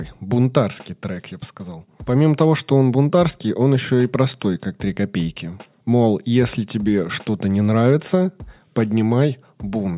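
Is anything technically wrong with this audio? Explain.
No, nothing technically wrong turns up here; the speech comes through steady and intact the whole way, with nothing that needs pointing out.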